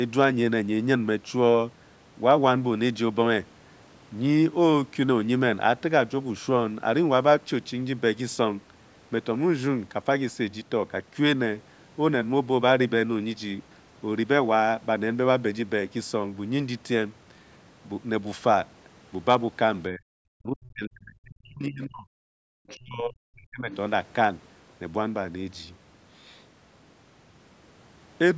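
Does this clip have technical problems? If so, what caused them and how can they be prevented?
Yes. Between 19.91 and 20.02 s, 20.34 and 22.1 s, and 22.75 and 23.71 s, the speech dips sharply, by as much as 40 dB, or cuts out in pieces. This is likely speech suppressed in double talk: the echo canceller confused the talker with the other side's loudspeaker echo. Using a headset or a canceller with better double-talk detection would prevent this.

From 22.38 to 22.47 s the room sound briefly drops out, by about 40 dB. This is background gated by the echo canceller, which clamped the microphone while the loudspeaker played. Gentler suppression or a headset would avoid it.

Faint scraps of the other side's voice leaking through appear from 22.68 to 22.75 s and from 23.72 to 23.77 s, well below the talker. The likely cause is residual loudspeaker echo that the canceller missed. Lowering the speaker volume or using headphones prevents it.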